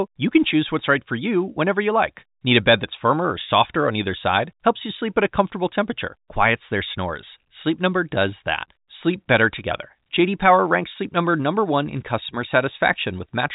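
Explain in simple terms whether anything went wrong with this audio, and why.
Nothing went wrong technically: the speech carries the narrow, slightly boxed-in sound of ordinary G.711 telephone coding, with nothing above about 3.8 kHz, which is simply how a standard phone line is meant to sound.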